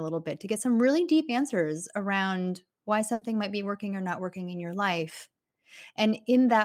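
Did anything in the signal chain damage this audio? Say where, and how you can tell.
Yes, at the network stage: a burst of packet loss at 3.13 to 3.23 s. The receiver held and faded the last sound for 80 ms, then resumed with 80 ms skipped.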